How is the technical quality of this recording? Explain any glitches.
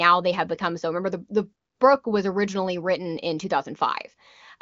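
No faults or glitches detected.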